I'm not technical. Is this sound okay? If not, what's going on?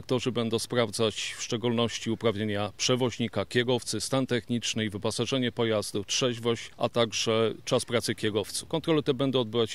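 Yes, this sound is okay. Listening closely, nothing in it points to a technical problem.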